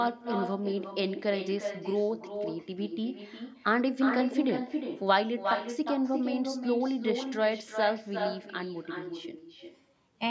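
From start to finish the speech carries an echo with no canceller: the far end's loudspeaker feeds its microphone, returning each phrase around 0.4 s later, only about 6 dB quieter and thinner. The waveform and spectrogram show every burst trailed by a fainter duplicate, all below the 8 kHz ceiling.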